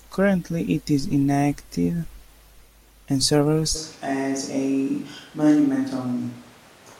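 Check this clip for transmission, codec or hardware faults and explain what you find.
A switch to a distant microphone begins at 3.77 s and lasts to the end. The likely cause is the close microphone dropping out, leaving a mic further away. From that point the speech turns abruptly roomy and hollow, with thinner bass, similar loudness, and room noise around 30 dB below the speech.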